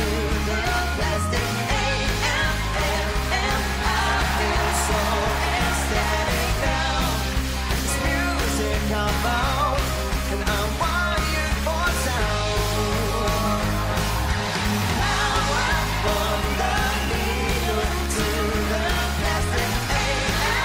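No technical faults are audible.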